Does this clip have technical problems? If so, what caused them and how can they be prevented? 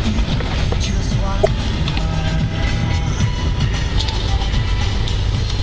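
Yes. From 1.43 to 1.46 s there is a short garbled glitch, and the audio jumps ahead. The likely cause is a broken MP3 bit reservoir, with 26 ms frames cut and the next frame borrowing the wrong bytes. Prevent it by cutting MP3 streams only with tools that respect the bit reservoir, or by decoding before editing.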